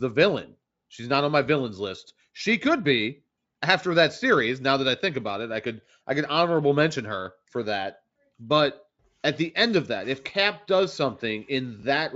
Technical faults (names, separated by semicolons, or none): chunks out of order